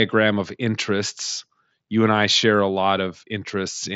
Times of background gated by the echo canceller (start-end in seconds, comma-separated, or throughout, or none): none